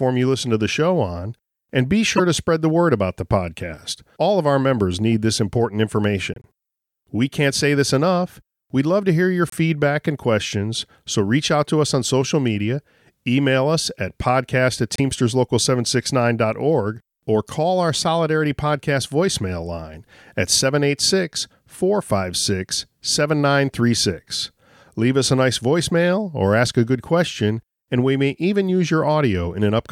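Short chirps and bursts of noise cut through the speech at 2.16–2.20 s, 6.34–6.46 s, 9.49–9.54 s and 14.96–15.00 s. The first is the loudest. These are corrupt frames decoded. Flipped bits in a few compressed frames each time were played anyway. The decoder misread gains and codes and placed energy at wrong frequencies for roughly the span of those damaged frames.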